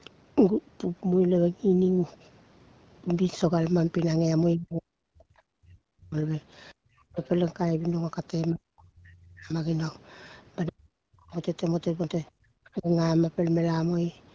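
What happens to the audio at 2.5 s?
Nothing goes wrong at 2.5 s: the speech there passes through the call's microphone processing and the HD Voice wideband coding intact, with no dropout, glitch or other fault at that moment.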